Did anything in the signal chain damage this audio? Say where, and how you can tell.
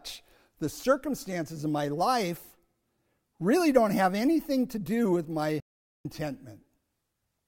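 Yes. A playback stall hits the speech at 5.60 s, right after "to do with my": the output drops to silence for about 0.45 s until 6.05 s, then resumes. The gap lands mid-phrase rather than at a natural pause, and the sound stops dead with no fade, which points to the playback stage rather than the recording. The likely cause is the player running short of buffered data or its audio thread being blocked.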